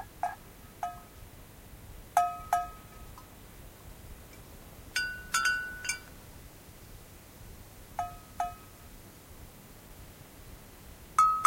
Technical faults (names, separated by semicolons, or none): loose connector crackle